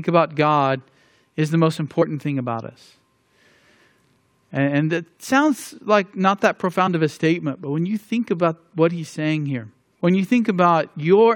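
At 2.01 s and again at 6.86 s, compressed frames are skipped. In each case about one frame of roughly 20 ms, fitting a 23.2 ms frame, never plays, so the speech jumps ahead. Each join is heard as a brief jump in the speech.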